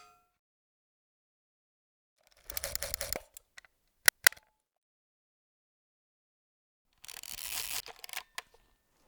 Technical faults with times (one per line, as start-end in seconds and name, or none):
2.79-3.16 repeated buffer
4.09-4.27 repeated buffer
7.62-7.80 repeated buffer